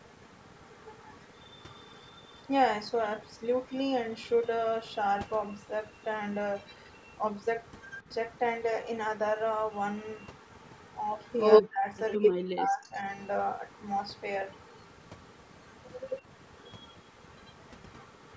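Overdone noise removal runs through the whole speech clip. Strong suppression has gutted bands near the noise floor, leaving twinkling specks, seen as scattered isolated dots on a near-black spectrogram background below the 8 kHz ceiling.

Echo leak appears from 0.0 to 4.29 s, 5.56 to 8.39 s, 10.23 to 12.29 s and 13.7 s to the end. It is likely a loudspeaker echo the canceller missed. A copy trails the voice by 93 ms, very quiet at first and about as loud as the speech in the third stretch, where it shows as doubled, smeared spectrogram striations.

Speech suppressed in double talk follows from 11.61 to 13.05 s. The talker likely got ducked along with the echo. Pieces totalling about a second dip by up to roughly 40 dB, visible as abrupt notches in the waveform envelope.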